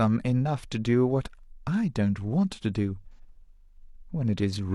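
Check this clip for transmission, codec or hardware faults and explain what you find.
One codec fault appears. AAC frame loss with concealment at 3.13 to 3.19 s: about 43 ms, which fits a single lost frame, is rebuilt from the last good spectrum, giving a brief smeared, phasey patch. A spectrogram shows a blurred, textureless block; the waveform loses its fine structure.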